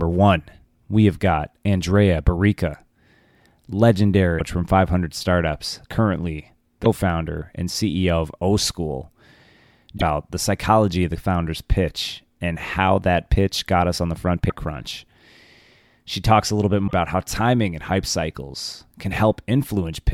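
Short glitches break into the speech at 4.35, 6.81, 9.94, 14.46 and 16.84 s, each lasting roughly 60 to 90 ms. They come from damaged data in a compressed stream: stretches of the encoded bytes were corrupted, so the decoder misread the affected frames, lost its place in the stream and had to search for the next valid frame header.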